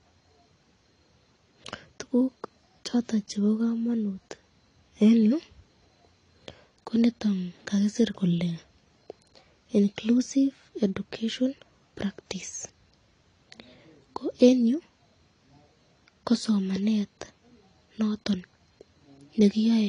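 Throughout the speech, the signal has likely been squeezed through AAC compression at a low bitrate, fitting AAC-LC at around 32 kbps. Nothing survives above 10.1 kHz, and coarse quantisation leaves the sound plainly dull and smeared, with fizzy, warbling sibilants.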